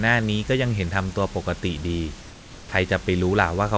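From 2.21 to 2.72 s, about half a second, the real room background drops out and a smooth, featureless hiss stands in, about 2 dB quieter. That's comfort noise in place of the background, likely the sender pausing transmission during the gap while the receiver synthesises filler noise.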